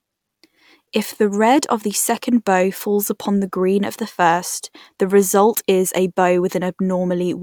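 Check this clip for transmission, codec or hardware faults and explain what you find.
Nothing in the speech stood out as a problem on listening.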